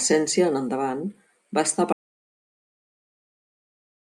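At 1.93 s the speech cuts out mid-flow and never returns. From there to the end, 4.13 s, there is an audio dropout to silence. The gap is silence, with no room tone or hiss underneath. That points to the input being lost while recording carried on writing silence. A disconnected device, failed link or accidental mute is the likely cause. Whatever was said after 1.93 s is gone.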